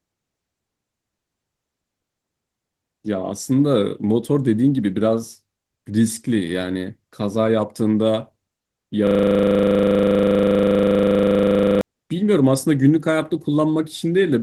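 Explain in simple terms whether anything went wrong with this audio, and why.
From 9.07 to 11.81 s the speech freezes into a rapid, rattling buzz: a system hang loop. The computer stalled while the sound hardware kept replaying the same 40 ms slice of audio, about 25 times a second, for nearly three seconds.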